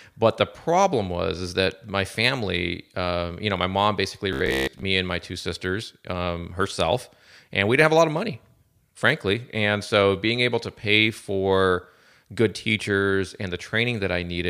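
Between 4.33 and 4.84 s, audio likely arrived too seldom, so playback kept repeating its last block of about 15 ms for most of that stretch. This robotic sound from repeated short buffers imposes a fixed 66.7 Hz buzz, a rigid metallic drone loosely following the speech.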